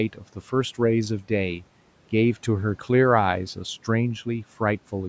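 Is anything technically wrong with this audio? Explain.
Yes. From 0.13 to 0.53 s there is speech cut by the noise suppressor. It mistakes quiet parts of the speech for background and turns them down, by about 10 dB at worst. Roughly 150 ms in total sounds swallowed and faint.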